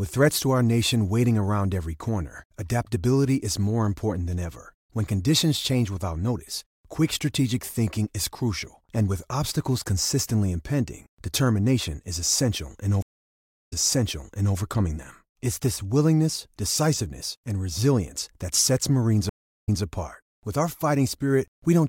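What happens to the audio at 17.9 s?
Nothing goes wrong at 17.9 s: the speech runs on cleanly there, with no dropout, click, distortion or other fault.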